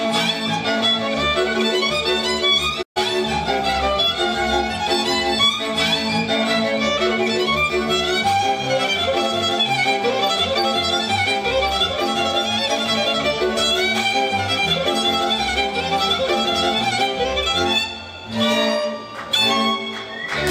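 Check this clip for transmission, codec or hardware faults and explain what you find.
One fault is present: a digital broadcast dropout from 2.81 to 2.98 s. The receiver stopped getting usable data, either because the signal was lost or because frames failed their checksum, so it muted rather than play corrupt audio. Sound fades to silence over about 20 ms, leaving a hole of roughly 128 ms, which fits about four lost frames, before the programme resumes. Whatever was transmitted during that gap is gone.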